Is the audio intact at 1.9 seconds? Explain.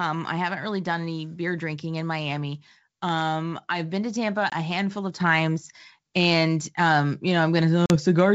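Yes, the audio is intact at 1.9 seconds, with the speech passing cleanly through G.722 wideband telephone coding at 64 kbit/s.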